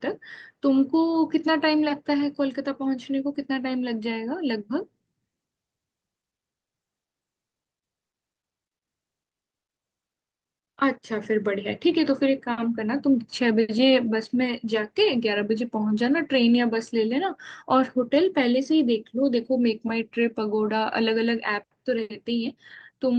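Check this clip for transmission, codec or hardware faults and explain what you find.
Nothing stood out on listening to this speech, which passes through an Opus call path with the upper band limited to around 12 kHz.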